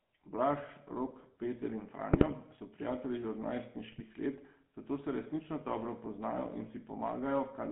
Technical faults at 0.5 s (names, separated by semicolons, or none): GSM full-rate codec